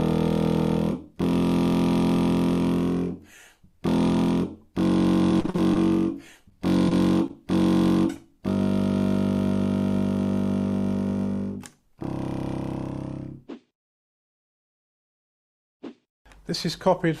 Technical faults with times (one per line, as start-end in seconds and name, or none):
5.31-5.77 repeated packet loss (robotic sound)
6.49-6.53 short concealed packet loss
6.89-6.93 short concealed packet loss
7.27-7.31 short concealed packet loss